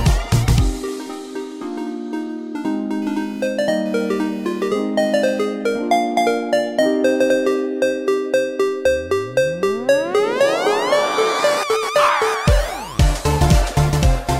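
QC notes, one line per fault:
3.02–5.45 s, computer activity noise: a buzzy, chirping rasp at around 500 pulses per second appears and vanishes, sitting roughly 30 dB below the wanted sound. It comes from processor or graphics load shifting the shared ground under the audio circuit, so it follows the machine's work rather than the audio. Unlike mains hum, it is not a steady tone locked to the supply frequency. It starts and stops abruptly and changes character as the load does.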